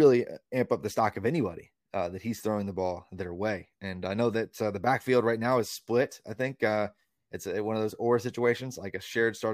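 No technical faults can be heard anywhere in the clip, so there is nothing to describe in time order.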